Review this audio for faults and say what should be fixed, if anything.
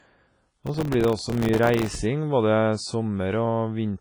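Processor overload crackle runs from 0.50 to 1.99 s. Very short buffers, around 1.5 ms, miss their deadlines about a hundred times. Each leaves a silent gap. Prevent it with larger buffers or less processing load.

The speech sounds washy and ringing, with a breathing hiss and nothing above 10.5 kHz. This is likely WMA compression at a low bitrate. Prevent it by encoding at a higher bitrate.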